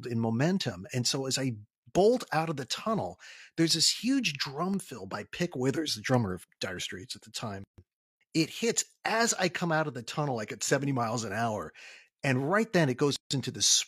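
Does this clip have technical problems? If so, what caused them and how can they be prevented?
Yes. Periodic USB or driver dropouts start just after "out of the tunnel", from 3.71 s to 7.96 s: about five brief ticks spaced 1.024 s apart. Each is a loss of roughly half a millisecond replaced by silence, as a background task stalls the USB bus or audio driver. A waveform shows tiny notches, and a spectrogram shows thin, evenly spaced vertical broadband lines. To prevent this, find and stop the periodic task (often power management or polling), or raise the buffer size.

There is a gap at a join of encoded pieces at 7.64–7.78 s (about 143 ms) and at 13.16–13.31 s (about 147 ms). Separately encoded segments were joined with each encoder's start-up delay and final-frame padding left in, so sound halts, then resumes where it stopped. The waveform shows a flat stretch, and the spectrogram shows a blank vertical band with slightly smeared edges. 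To prevent this, encode the material in one pass, or trim the encoder delay and padding before joining.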